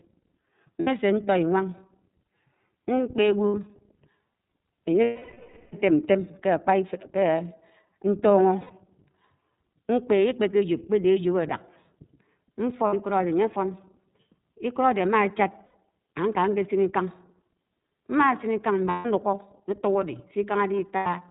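Throughout, the speech carries the iLBC codec. Nothing above 4 kHz survives, so it sounds narrow. Vowels have a rough, slightly synthetic edge. The damage is plainly audible, which fits iLBC's 13.33 kbps mode with 30 ms frames.

Lost iLBC frames then break in at 0.80, 3.48, 5.03, 8.60, 12.86, 15.66, 18.89 and 20.96 s. The decoder repeats the last pitch cycle, mixed with noise. Each gap becomes a held, buzzy vowel. Most last 60 to 150 ms. The one at 5.03 s runs 690 ms and fades away. The voice is right again almost at once after each.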